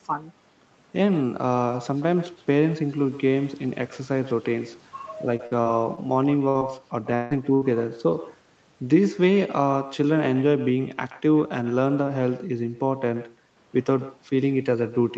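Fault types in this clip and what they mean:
Echo with no canceller: a quieter copy, about 17 dB down, trails the speech by roughly 150 ms, visible as faint repeated onsets just behind each syllable on the spectrogram.
Repeated packet loss (robotic sound): between 5.37 and 5.99 s, four short gaps up to 44 ms, about a fifth of the span, appear as smeared, flattened harmonic patches with choppy waveform edges.
Burst of packet loss: around 60 ms each, at 6.49 to 6.57 s and 7.55 to 7.63 s, shows as held harmonics or hiss fading in amplitude, then an abrupt jump back.
Short concealed packet loss: at 6.59 to 6.63 s, roughly 20 ms of audio is replaced by a brief smear, a tiny blurred spot and a slight waveform kink.
Long network dropout: from 7.15 to 7.33 s, about 160 ms of sound is replaced by a fading buzz or hiss rather than silence, likely a lost stretch, seen as stretched, dimming spectral bands.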